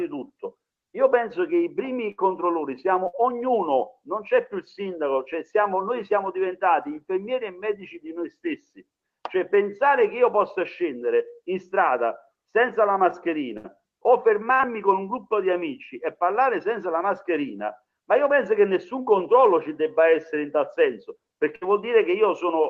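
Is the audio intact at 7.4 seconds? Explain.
Yes, the audio at 7.4 seconds is intact, with only the ordinary character of a WebRTC call path, where the codec's top end stops at about 12 kHz.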